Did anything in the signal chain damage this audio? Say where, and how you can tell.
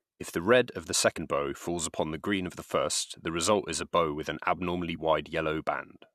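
Yes, at the codec stage: damaged data in a compressed stream causes two brief blips. The first is at 1.16 s, between "the red of the" and "bow falls upon the"; the second runs from 4.95 to 4.97 s, just after "bow with an abnormally". Corrupted bytes make the decoder misread those frames and hunt for the next valid header. On a spectrogram each blip appears as a thin vertical break; the waveform shows a short, abrupt discontinuity.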